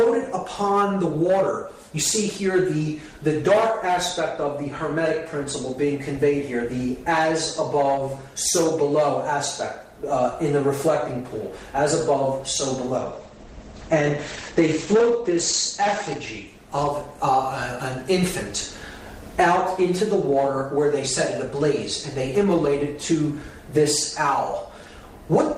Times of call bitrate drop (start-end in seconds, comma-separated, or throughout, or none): 12.99-17.23